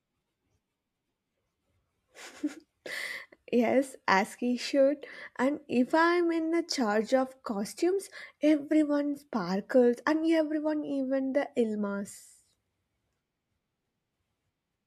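No technical faults are audible.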